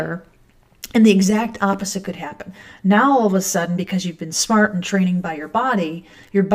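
From 1.30 s to the end, one channel runs about 10 ms late and the pair is summed to mono, causing channel delay (comb filtering). Shared content cancels at evenly spaced frequencies, starting around 50 Hz, so the sound turns hollow and phasey throughout.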